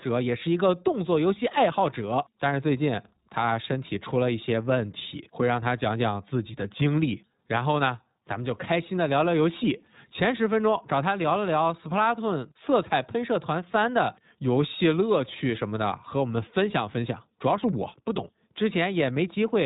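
Throughout, the speech carries iLBC codec damage: each 20 ms frame's excitation is coded independently, which fits the 15.2 kbps mode. A spectrogram shows a flat ceiling at 4 kHz with nothing above it, and the plainly audible coding leaves a rough, slightly synthetic sound.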